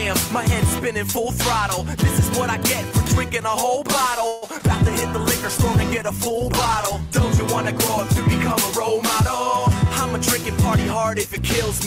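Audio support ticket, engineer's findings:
Call audio freeze, 4.27–4.44 s: last sound stretched into a fading buzz for about 150 ms, then resumes intact. Likely jitter buffer underrun from delayed packets; adds about 150 ms latency.

Short concealed packet loss, 4.58–4.61 s: brief smear/wobble. Decoder missed packets; about 10 ms concealed by extrapolation, about 20 ms of real audio lost.

Call bitrate drop, 4.77–7.30 s: audio turns coarse and duller. Bandwidth estimate fell, encoder cut from 64 to 13 kbps, held at the lowest rate for about 2.4 s before recovery.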